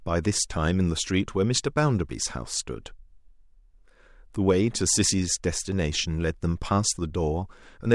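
No technical faults can be heard anywhere in the recording. The speech runs on without any interruption or audible alteration from the first moment to the last.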